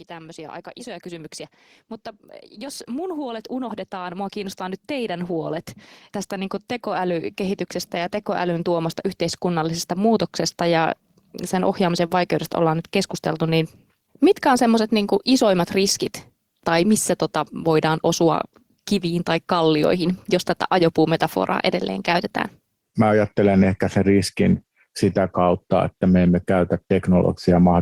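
Automatic gain rising occurs twice, from 2.55 to 5.72 s and from 6.28 to 10.36 s, ending just before "ja sen ohjaamisen vaikeudesta". Each time the gain control judges the input too quiet and lifts level by about 7 dB, so speech and background swell together.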